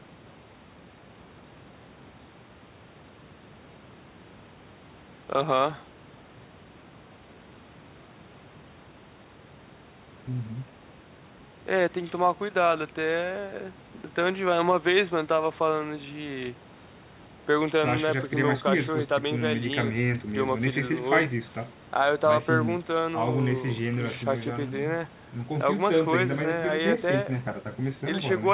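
No faults found in the speech; the spectrum stops at 4 kHz, consistent with a narrowband G.711 mu-law call path, and the trimmed low bass is the call microphone processing's normal high-pass.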